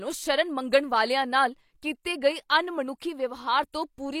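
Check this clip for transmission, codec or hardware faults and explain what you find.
There is one codec fault, a pre-echo at 3.72 s. The transform codec coded a sharp onset that sat late in its block and spread the block's quantisation noise evenly across it. Noise sized for the loud attack therefore also filled the quiet stretch just before it, about 12 ms ahead of the onset. It is heard as a brief hiss leading into the attack, which itself comes across softened and smeared rather than crisp.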